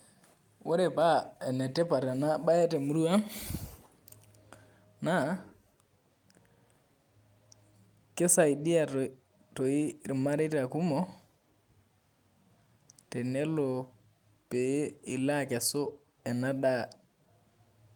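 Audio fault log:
No faults were detected in this speech recording.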